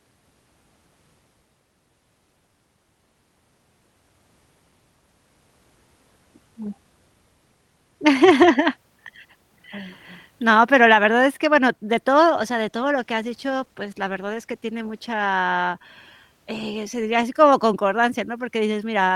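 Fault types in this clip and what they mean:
call bitrate drop: Right after "que bueno de todo", from 12.37 to 15.39 s, the call encoder falls from 32 to 18 kbps, so the speech turns rougher and more watery. On a spectrogram, upper-band detail goes patchy and smeared before returning.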